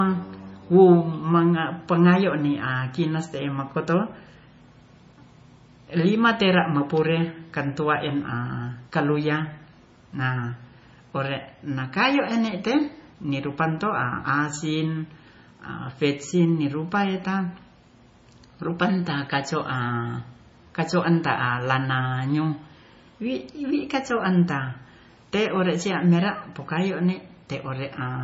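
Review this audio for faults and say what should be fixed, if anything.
Throughout, the speech sounds watery and swirly with nothing above 7.6 kHz, likely from heavy MP3 compression dropping weak frequency lines, which fits a bitrate near 24 kbps. To prevent it, encode from the original source at a much higher bitrate or keep a lossless copy.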